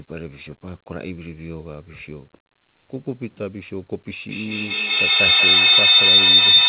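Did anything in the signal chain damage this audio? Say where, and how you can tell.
Yes, and it happens in the room around the call, not in the wiring or the codec. From 4.29 s to the end there's a feedback howl: a tone around 4 kHz that swells to about 18 dB above the speech and pulses roughly every fifth of a second. That's two devices on the same call in earshot of each other, with each pass through mic, call path and speaker adding gain. The howl sits right at the top of the band, where the call audio stops at 4 kHz, which fits a G.711 telephone codec.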